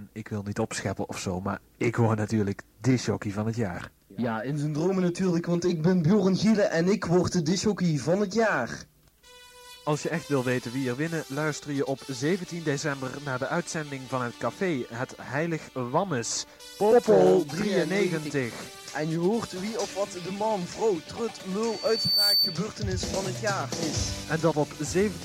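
At 21.64 s a loudspeaker feedback squeal kicks in: a single tone around 4.5 kHz that swells over roughly half a second until it sits a few dB above the rest of the sound, then cuts off at 22.67 s. The microphone was catching the speaker it feeds, and at that one frequency the loop gain went past unity, so the tone just kept reinforcing itself around the loop.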